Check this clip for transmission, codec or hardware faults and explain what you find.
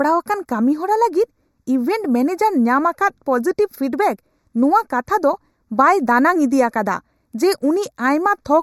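One fault runs through the whole speech clip. Channel delay (comb filtering), throughout: one channel lags about 0.15 ms before mono summing, cancelling evenly spaced frequencies from around 3 kHz and giving a hollow, phasey tone.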